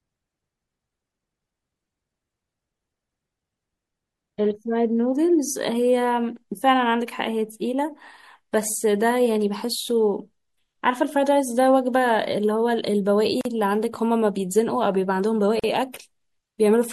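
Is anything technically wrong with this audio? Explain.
Yes, there are two problems. Throughout the speech the high end is cut off and quiet detail flickers in and out, giving a watery, swirly texture with metallic chirps on s sounds and blurred onsets. The likely cause is MP3 compression at a low bitrate, around 64 kbps: too few bits forces the encoder to drop the treble and zero out weak frequency lines frame by frame.

Gaps at joins of encoded pieces occur at 13.41 to 13.45 s and 15.60 to 15.64 s. Separately encoded sections were spliced without trimming the encoder's start delay and end padding, so each join leaves a gap of about 41 ms with smeared edges, the silent part a little shorter, before the speech resumes where it stopped.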